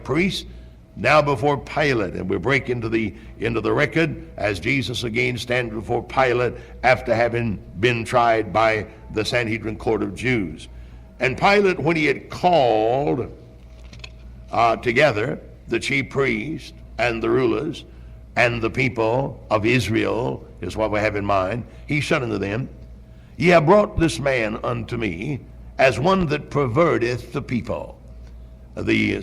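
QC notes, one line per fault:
23.98–24.06 s and 26.21–26.24 s, loud pop: a double pop about 10 dB over the sound, then one about 5 dB over. Likely brief voltage pulses.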